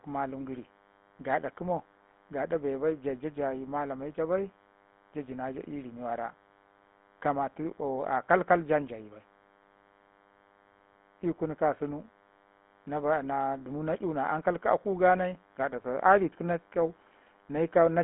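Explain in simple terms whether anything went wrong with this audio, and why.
A faint, steady, thin buzz runs under the speech from start to finish. It stays well below the talking but never lets up. This is DECT cordless phone buzz. A cordless phone or its base station nearby sends short radio bursts 100 times a second, and the audio electronics turn those bursts into sound. The result is a low 100 Hz hum with a sharp, rasping edge, because many higher tones ride along with it.

The speech itself sounds muffled and boxed-in, with a gravelly, buzzy roughness clearly audible throughout. That is the GSM full-rate codec, an early mobile-phone compression method. It keeps only a rough sketch of the voice, rebuilding it from a model of the mouth and throat driven by evenly spaced pulses, which causes the grainy texture. The phone line also limits the sound to roughly 200 Hz up to 3.4 kHz, with nothing at all above 3.8 kHz, so the brightness and crispness of the voice are gone.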